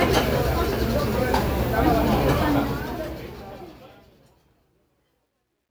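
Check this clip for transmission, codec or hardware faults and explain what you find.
One fault is present, in the closing fade of this sound clip. Truncation distortion on a fade runs from 2.43 s to 5.71 s. The fade stage keeps too few bits, consistent with 12-bit resolution, and adds no dither. The tail turns gritty, worst from 4.01 s.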